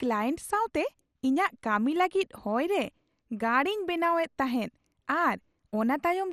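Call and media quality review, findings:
MP2 compression throughout, likely a starved Layer II encoder consistent with 64 kbps. Upper sub-bands switched off, so nothing above 14.4 kHz. Remaining bands coarsely quantised, making the speech sound dull, gurgling and granular.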